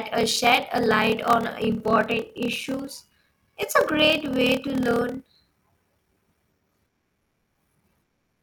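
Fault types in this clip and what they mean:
Block size mismatch (padded): one stage hands over shorter blocks than the next one reads, so each block gets topped up with zeros and a tiny gap of silence is inserted every time. Here that shows up as a steady buzz at about 38.3 Hz running under the whole speech clip, and the speech plays at 0.889 times normal speed while the timbre stays. That ratio fits 1024-sample writes into slightly larger reads.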